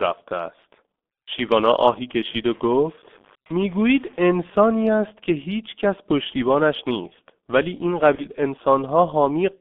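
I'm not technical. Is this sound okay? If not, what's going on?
No. Throughout, the speech sounds muffled, hoarse and thin, like an old internet phone call, with smeared consonants. That's the G.723.1 codec, which squeezes speech heavily and keeps only sounds between about 200 Hz and 3.6 kHz.

From 2.51 to 4.40 s, a gritty, grainy roughness clings to the speech and shifts as it changes. This is likely low bit depth without dither: the sound was stored with very few levels and roughly chopped, so quiet parts crumble.

Around 8.15 to 8.26 s, the speech is briefly stretched into a fading buzz or noise, then stays weak or distorted for a moment. That's VoIP packet loss concealed by the speech codec: about 30 ms of audio went missing, and the decoder guessed to fill the gap.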